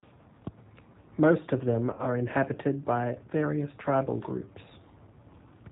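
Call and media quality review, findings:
G.729 codec throughout: band-limited, slightly rough, synthetic speech, with plainly audible coding damage. The spectrogram shows a hard ceiling at 4 kHz and smeared, pulse-like fine structure. The sound fits 8 kbit/s G.729A, which resynthesises speech from a vocal-tract filter, pitch predictor and sparse pulses.

VoIP packet loss concealed by the speech codec, 1.93 to 2.06 s: about 60 ms of audio replaced by a stretched, buzzy tone or coloured noise that fades, consistent with two lost packets. The decoder extrapolates from its last pitch and filter state at falling gain. The waveform shows a decaying envelope, then weak, distorted recovery as the state rebuilds. The spectrogram shows flat, repeated spectral frames.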